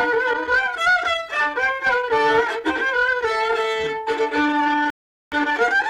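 At 4.90 s the player ran dry of downloaded audio and halted until more data arrived, a rebuffering stall lasting until 5.32 s. The sound drops to silence for about 0.42 s, then picks up exactly where it broke off, with nothing missing, only time added.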